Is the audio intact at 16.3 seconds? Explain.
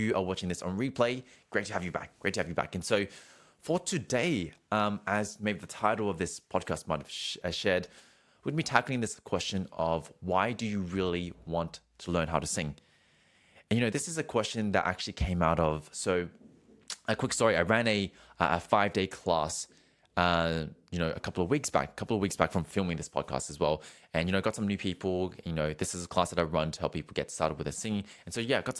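Yes, the speech plays through 16.3 seconds with no audible dropout, click, distortion or other disruption.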